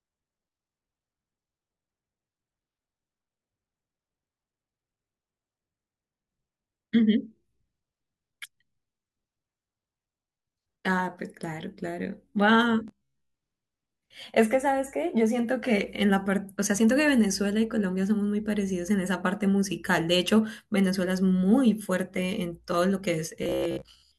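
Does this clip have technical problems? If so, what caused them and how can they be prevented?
Yes. Audio likely arrived too seldom, so playback looped a short buffer of about 15 ms, skipping most of the real speech. This robotic sound from repeated short buffers is a rigid, metallic 66.8 Hz buzz at 12.88–13.36 s and 23.43–24.18 s. A larger jitter buffer or steadier audio delivery would prevent it.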